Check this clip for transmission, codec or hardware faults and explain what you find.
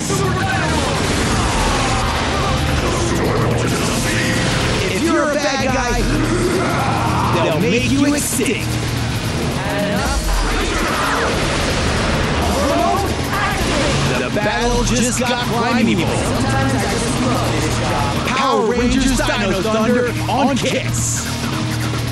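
One fault runs through the whole clip: channel delay (doubling). One channel arrives about 92.9 ms late, which fits a 4096-sample buffer. Summed to mono, every onset repeats as an equal-level slap echo, and the waveform shows paired transients spaced 92.9 ms apart.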